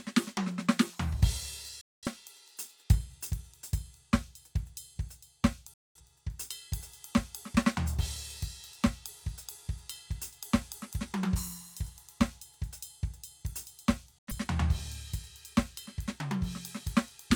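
The music drops out three times: 1.81 to 2.07 s, 5.74 to 6.01 s, and 14.18 to 14.32 s. Each is a digital broadcast dropout. The receiver stopped getting usable frames and muted until good ones returned. The sound snaps to silence through a 3 ms fade, then resumes further along. The first two gaps last about a quarter second, which fits roughly five lost frames. The last is shorter, fitting about two. The music in each gap is gone.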